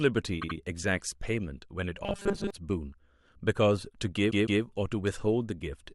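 From 0.41 to 0.56 s the speech stutters: a 78.4 ms stretch plays three times in a row. These are repeated frames. A short run of compressed frames was delivered again and decoded twice more, adding about 157 ms to the timeline.

Between 2.04 and 2.51 s the speech becomes a rigid, metallic buzz at a fixed 200 Hz pitch while still loosely tracking the syllables. This is robotic sound from repeated short buffers. The likely cause is audio arriving too slowly, so the playback loops the newest 5 ms of sound to fill the gap. That loop length sets the 200 Hz tone, and most of the real audio in that stretch is skipped.

At 4.30 to 4.61 s the same repeated-frames fault returns with a longer 156.7 ms block. It again plays three times in all, giving a stammer that adds about 314 ms.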